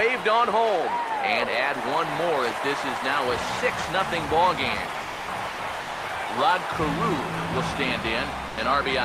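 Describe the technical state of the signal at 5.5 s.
From 5.49 to 5.59 s, about 100 ms of sound is replaced by steady comfort noise, likely sound dropped by the voice detector, not packet loss, since the fill is smooth rather than glitchy.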